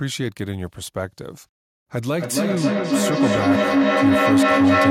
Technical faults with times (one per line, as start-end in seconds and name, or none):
2.15-4.90 feedback howl